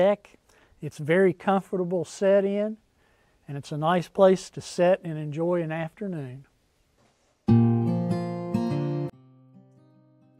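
From 9.10 s to the end, one channel inverted likely cancels the centre when summed: level falls about 32 dB, waveform collapses, spectrogram empties.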